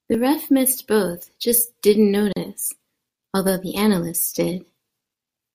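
A speech clip with a single gap at a join of encoded pieces, running from 2.33 s to 2.36 s, just after "missed both just didn't". The sound drops out for 38 ms, its edges smeared by the codec, then resumes exactly where it stopped, with nothing lost. This points to two separately encoded segments butted together untrimmed, leaving the encoder's start-up delay and last-frame padding in place as dead air inside continuous speech.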